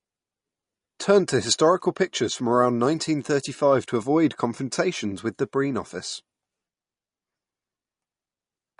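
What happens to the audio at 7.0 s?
At 7.0 s, as throughout the speech, the sound is likely MP3 compression: treble stops sharply near 10.6 kHz, and flickering, watery swirl from dropped spectral lines sets it apart from a simple low-pass filter.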